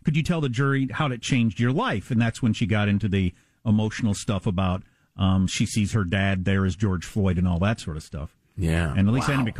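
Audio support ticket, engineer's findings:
No technical faults detected in the speech signal; the playback path shows no dropouts, distortion, level anomalies or timing irregularities at any point.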